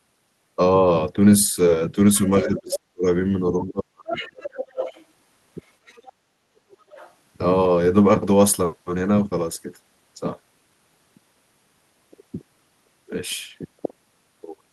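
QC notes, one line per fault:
2.14–2.35 s, 2.70–2.76 s, 4.08–5.03 s, 5.86–6.13 s and 6.80–7.13 s: other side's voice leaking through. A second, far-end voice sits under the talker, faint at roughly 25 to 30 dB below the speech in the first, fourth and fifth stretches and much closer, around 10 dB down, at 2.70 s and through 4.08–5.03 s. This is likely loudspeaker playback reaching the microphone and surviving the echo canceller.
2.44–3.05 s and 3.67–4.62 s: speech suppressed in double talk. The talker's level sinks while the far end is also active, by around 40 dB in the first stretch, over about half a second, and by around 30 dB in the second, across about a second. The talker audibly fades. This is likely the echo canceller failing to separate near speech from echo while both sides speak, so it turns both down.
6.13–6.54 s: background gated by the echo canceller. Right as the leaked far-end voice ends, the room tone dips by about 7 dB for around 0.4 s before recovering. 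The canceller is still clamping the microphone after loudspeaker activity and releases a moment later, so the ambience briefly hollows out and then returns.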